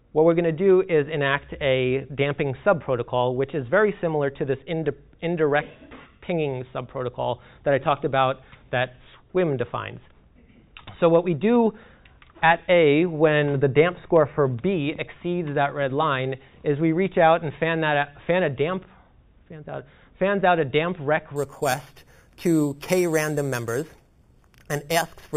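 From 21.36 s on, there's imaging from sample-and-hold upsampling. Repeated, unfiltered samples fit an 8 kHz source and mirror a metallic fizz, about 16 dB down, into 4–8 kHz.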